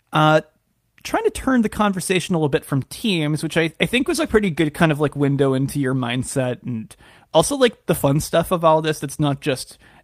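A call bitrate drop hits this speech recording from 3.97 to 5.41 s, just after "teams which I I" and before "into your mindset and". The encoder's bit budget appears to fall sharply, with a sound that points to a slide from around 40 kbps to about 18 kbps, held at its lowest for roughly 1.4 s. With fewer bits, the codec quantises coarsely and trims the upper band, so the speech turns rough, watery and muffled until the rate climbs back.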